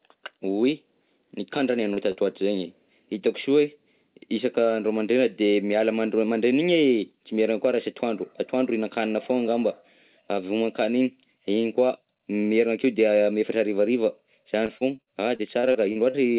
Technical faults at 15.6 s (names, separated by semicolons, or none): repeated packet loss (robotic sound)